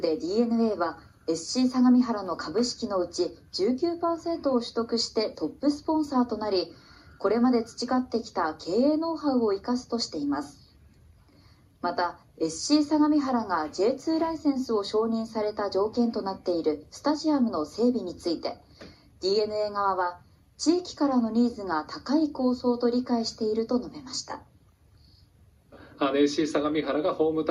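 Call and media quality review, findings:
No faults found.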